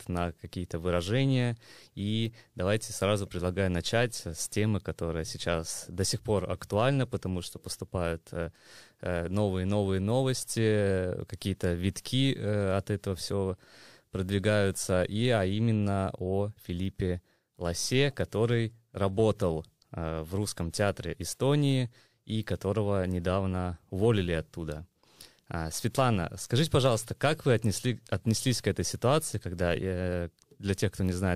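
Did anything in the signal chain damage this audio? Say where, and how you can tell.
No, no signal-chain damage found.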